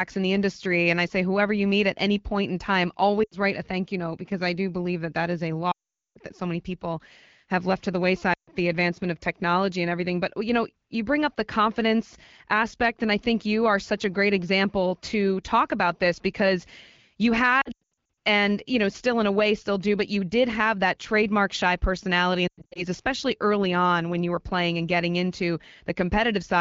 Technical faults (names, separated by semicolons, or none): lost AMR speech frames